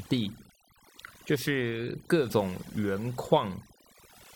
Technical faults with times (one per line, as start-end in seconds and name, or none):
0.00-4.35 overdone noise removal